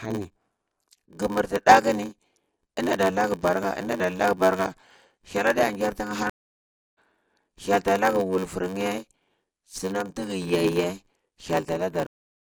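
A block size mismatch (padded) runs through the whole recording. One stage hands over blocks shorter than the next stage reads, and the gap in each block is filled with zeros. The result is a steady buzz at 93.8 Hz, which fits a 512-sample read block. The speech also plays at 0.861 times normal speed, so delivery is slowed while pitch stays at about its natural level.

A stream reconnect begins at 6.30 s. The audio drops to silence for 0.58 s, and at 6.98 s the player restarts with a fresh decoder. Playback picks up roughly half a second later in the material than where it broke off, so that stretch of speech is missing. A second stream reconnect starts at 12.06 s with a 0.79 s silence. This time the audio resumes 0.51 s earlier than the break, so a short passage is repeated, as happens when a server resends a burst.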